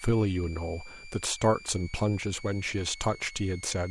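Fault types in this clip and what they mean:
Switching supply whistle, throughout: a switching power supply cycling in an audible burst mode, or beating against another supply, leaks a thin high whistle between about 2.15 and 2.38 kHz, roughly 20 dB below the speech.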